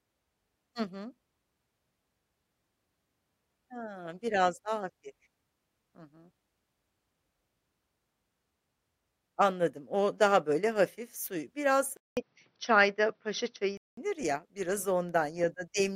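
Speech clip where the input switched to a poorer device from 11.97 s to 13.97 s, just before "ya biraz": after a 200 ms gap the sound turns dull and boxy with nothing above 6 kHz and a faint new noise floor at about the same level, likely a changed microphone or headset call profile.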